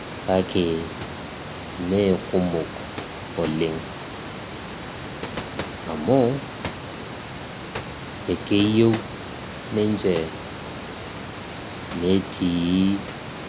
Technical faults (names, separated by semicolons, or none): none